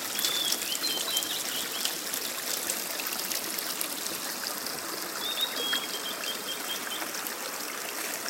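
Nothing goes wrong here at any point: the sound runs along steadily with no technical faults to point out.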